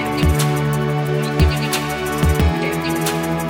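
From start to finish the audio runs with a wrong sample rate: the samples are clocked out faster than they were captured, with no conversion, so everything plays 1.5 times too fast and about 7 semitones too high. That ratio points to material recorded at 32 kHz being played back at 48 kHz. It sounds hurried and chipmunk-bright. On a spectrogram every component sits 1.5 times higher in frequency and each event is squeezed in time; the waveform shows correspondingly shorter cycles.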